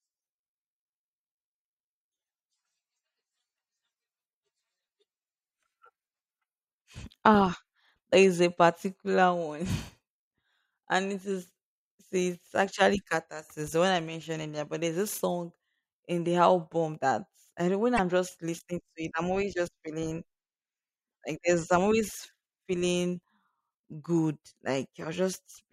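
At 17.94 to 17.99 s, damaged data in a compressed stream corrupts part of the stream, so the decoder misreads those frames, loses sync and hunts for the next frame header. The speech breaks briefly, for about 50 ms.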